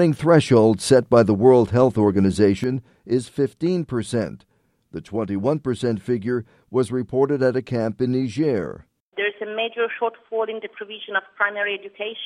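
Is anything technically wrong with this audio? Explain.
Yes. From 2.64 s to the end, the level drops abruptly by about 6 dB. Likely one channel drops out, halving the shared signal in the mono sum.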